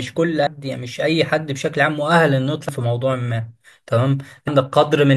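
Damaged data in a compressed stream strikes at 0.47, 2.69 and 4.48 s: each time, corrupted bytes make the decoder misread the frame and lose sync, so the speech breaks into a chirp, squawk, click or short hole while it hunts for the next valid frame header.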